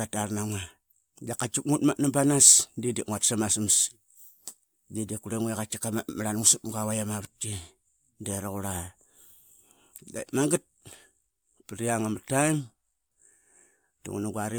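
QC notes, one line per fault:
No fault to note.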